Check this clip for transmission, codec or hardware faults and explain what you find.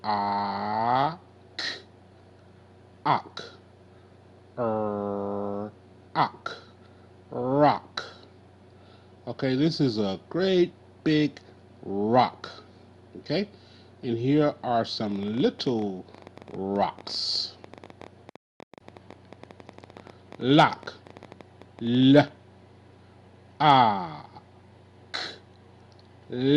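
There's one fault worth flagging: a train of clicks running from 15.07 to 22.29 s. Around a hundred sharp pulses of much the same shape arrive at about 11.8 per second, unevenly spaced, and they come through roughly as loud as the sound itself. The likely cause is something outside the audio path, such as interference from nearby equipment or a flaky connection or power supply, repeatedly injecting a pulse. You hear it as an irregular ticking or popping laid over the audio, and it carries on through the pauses too.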